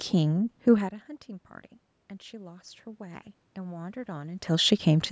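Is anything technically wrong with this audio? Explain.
Yes. From 2.29 s to 5.07 s there is automatic gain rising: after the input level drops by about 18 dB, the automatic gain control slowly raises its gain by about 5 dB, so the speech and the room noise behind it swell together over nearly three seconds.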